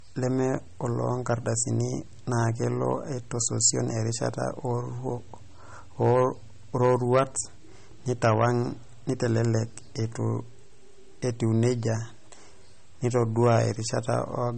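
Throughout the speech, low-bitrate audio saved at a high bitrate is the likely cause: an earlier low-rate MP3 pass stripped detail that re-encoding cannot restore. Nothing sounds above 8.4 kHz, so the voice stays dull and muffled, with the first encoding's smeared artefacts intact.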